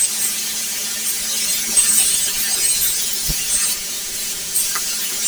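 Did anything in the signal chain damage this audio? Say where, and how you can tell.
Yes. Planar audio read as interleaved, throughout, at sample-format conversion: each 10 ms block replays each channel at double speed, leaving a robotic 100 Hz buzz with no clear octave shift.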